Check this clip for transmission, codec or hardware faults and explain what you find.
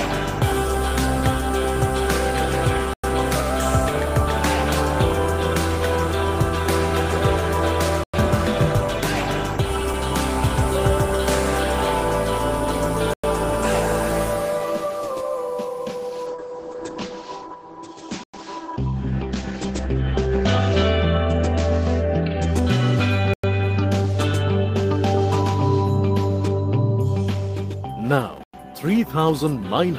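Two faults are present: regular gaps between chunks, and one call bitrate drop.

Gaps between chunks come at 2.94, 8.04, 13.14, 18.24, 23.34 and 28.44 s. Each is a 100 ms hole. The audio arrives in 5-second chunks, and silence is left between them. Nothing is lost, but the sound breaks at every join.

A call bitrate drop runs from 16.29 to 22.58 s. The encoder was told to spend far fewer bits, which fits a fall from 32 to 12 kbps. It stays at its worst for about 4.1 s. Bandwidth shrinks from 20 kHz to 8 kHz. The sound turns muffled and rough until the rate recovers.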